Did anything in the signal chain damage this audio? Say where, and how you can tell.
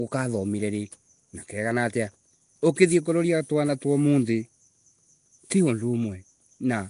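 Yes, at the codec stage, across the whole clip. The speech has a rough, hissy halo and a smeared, underwater quality, with nothing above 10.6 kHz. Noise filling bands starved of bits points to likely Nellymoser compression at about 44 kbps. Unlike packet loss, it never drops out.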